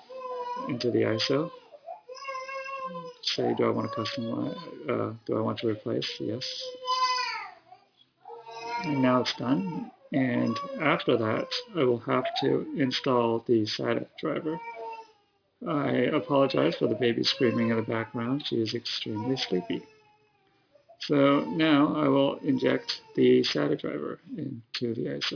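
Aliasing runs through the whole clip: high content has been folded back down around 5.5 kHz, which fits a drop from 44.1 kHz to about 11 kHz without an anti-alias filter. The folded components sit well below the main signal, giving sharp sounds a gritty, metallic edge and pushing energy right up to the band edge. A clean band-limit would only sound dull, whereas this adds tones that don't belong.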